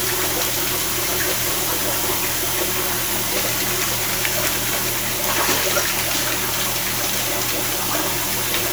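No technical faults can be heard anywhere in this recording of sounds. There are no dropouts, glitches or other disturbances at any point.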